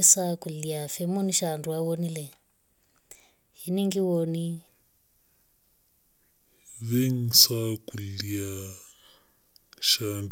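From 4.68 s, right after "iningi woni", the speech falls into a section at the wrong speed. It plays at 0.677 times its recorded rate until the end. Pitch and tempo drop together, roughly seven semitones deeper, slow and heavy. The likely cause is a mismatched playback clock.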